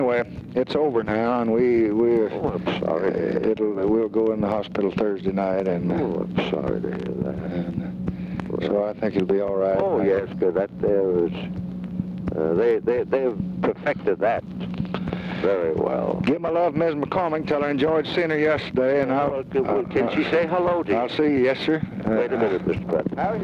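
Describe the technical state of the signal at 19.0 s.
At 19.0 s, as across the whole clip, there is gain pumping: the input gain is likely set far too high, so a fast limiter clamps down on each loud sound. The gain swings by around 10 dB, leaving the sound squashed.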